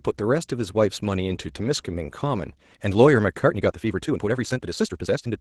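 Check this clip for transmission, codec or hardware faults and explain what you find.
Two faults are audible: Opus voice compression across the whole speech clip, and a time-stretched section over the last two seconds.

The Opus voice compression runs from start to finish. The lower band sounds like SILK's linear-prediction coding, with a CELT layer adding the top end, and the damage is plainly audible. Speech comes out slightly hoarse and robotic, which fits a rate near 16 kbps. The full-bandwidth top rules out band-limiting from an old phone line, and the coarse grain stays steady rather than arriving in bursts the way packet loss does.

The time-stretched section starts at 3.45 s and runs to the end. There the pace jumps to about 1.52 times normal while the pitch holds. Speech turns rushed, which is likely the result of software dropping short pieces to squeeze the audio into a shorter length. 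A simple playback-speed error would raise the pitch along with the tempo. Dropouts would leave silent gaps rather than clipped, hurried delivery.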